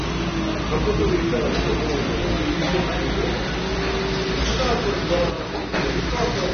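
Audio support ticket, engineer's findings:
AAC compression, likely a low-bitrate AAC-LC encode around 24 kbps. Nothing above 6.3 kHz, so the sound is dull, smeared and plainly damaged throughout.

Sudden gain jump at 5.3 to 5.74 s, likely an unramped digital gain change. Sound and background noise drop together by about 6 dB, then return.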